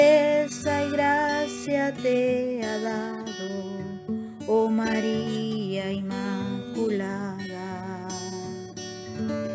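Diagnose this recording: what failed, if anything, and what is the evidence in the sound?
Nothing in the recording points to a failure at any stage of the chain. No audible event in the sound serves as evidence of a fault, so there is nothing to trace to a cause.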